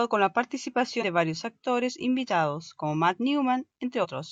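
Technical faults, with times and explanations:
0.98 s and 4.00 s, compressed frames skipped: the speech jumps ahead by roughly 100 ms, about two frames of 46.4 ms, just before "de varios actores invitados" and again near the end. Whole frames are left out of playback, so the speech skips straight ahead rather than pausing in the silent gap of a dropout.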